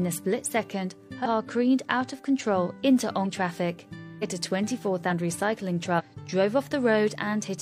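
Compressed frames are skipped five times: at 1.21 to 1.26 s, 3.21 to 3.26 s, 4.18 to 4.24 s, 5.07 to 5.09 s and 5.95 to 6.01 s. Each time, whole frames never reach the output. The sound lurches forward, losing about a fifth to two-fifths of a second. The jump sizes fit frames of about 46 ms.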